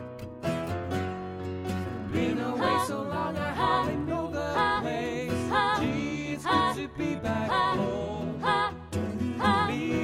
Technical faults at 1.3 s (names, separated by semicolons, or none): none